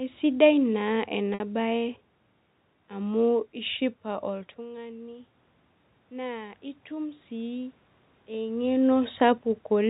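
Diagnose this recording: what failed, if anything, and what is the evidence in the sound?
The network stage failed once, between 1.34 and 1.40 s, with packet loss with pitch repetition. About 60 ms of audio is missing, which fits three lost 20 ms packets. The receiver filled the gap by repeating the last pitch period and fading it out. The result is a brief held, buzzy tone in place of the missing speech. A short cross-fade then brings the real signal back.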